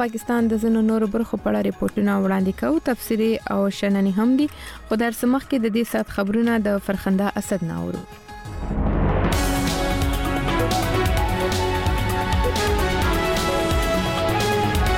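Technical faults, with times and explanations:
1.94–1.97 s and 7.97–8.08 s, corrupt frame concealed: damaged bits in the AAC stream were caught by the decoder, which covered the affected stretch itself by muting it or substituting a scrambled copy of the previous good spectrum. The short one fits a single frame, the longer one about three.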